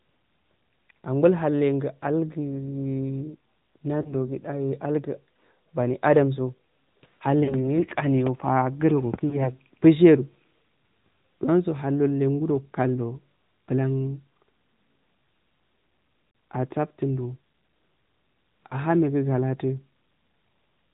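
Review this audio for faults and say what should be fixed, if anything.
The whole clip carries the sound of the AMR narrowband mobile codec. The speech has a buzzy, synthetic edge from its coarse pulse-driven vocal-tract model, at a quality that points to a mid-rate mode around 10 kbps. A spectrogram shows a hard ceiling at 4 kHz with nothing above it, and smeared, blotchy harmonics below. The waveform looks intact, so the damage lives in the spectrum. To prevent it, capture or route the call over a wideband path instead of a narrowband mobile leg.

Lost AMR speech frames cause short dropouts at 4.02–4.14 s, 7.44–7.55 s, 9.30–9.56 s, 16.30–16.34 s, and 18.68–18.78 s, the last just before "megu galatu". At each one the decoder filled a gap of 20 or 40 ms by repeating its last good pitch and vocal-tract settings with falling gain. A single lost frame is heard as a brief dip or warble, and the two-frame gaps at 7.44 s and 16.30 s as a drawn-out sound that fades. 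On a waveform it looks like a sagging envelope, and on a spectrogram as frozen, stretched harmonics that fade. Preventing it means improving the radio link or adding error protection so that frames arrive intact.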